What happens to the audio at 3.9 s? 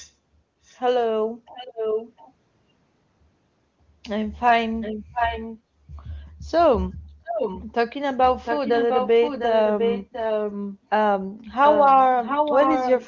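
Nothing goes wrong at 3.9 s: the speech passes through intact, with no dropout, glitch or distortion at that point.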